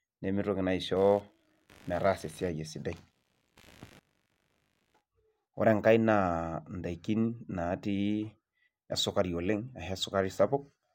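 Processor or peripheral load disturbed the shared audio ground from 0.96 to 5.01 s, adding computer activity noise: a faint buzzing chirp pulsing around 70 times a second, roughly 30 dB below the speech.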